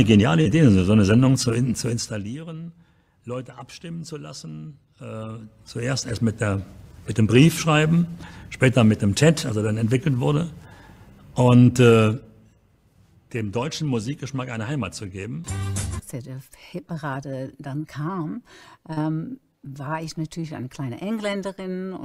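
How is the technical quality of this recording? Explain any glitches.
There are three audible glitches in two kinds, so the quality isn't clean.

Short concealed packet loss shows up at 0.41–0.47 s and again at 18.93–18.98 s. Each time roughly 40 ms of audio arrived too late to decode, and the receiver papered over the gap by extending the preceding sound before easing back into the real signal. You hear a quick smear or wobble.

Zipper noise runs from 1.86 to 2.39 s, during a level drop of roughly 15 dB. The gain falls in 1 dB jumps, about 40 per second, with no smoothing between them. Each jump leaves a tiny click, and together they make a fast zipping texture on the sound as it fades down.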